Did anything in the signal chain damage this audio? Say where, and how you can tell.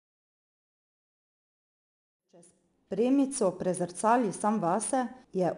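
Yes. The codec stage is at fault: 4-bit ADPCM compression runs through the whole clip. Every louder stretch of the speech carries a gritty hiss that rises and falls with the level, and sharp onsets sound coarse where the adaptive step size cannot grow quickly enough. Nothing is present above 10.6 kHz, which, with the plainly audible grain, fits a sample rate near 22 kHz at about 89 kbps. The smooth fade-in, complete by 3.52 s, carries the same grain.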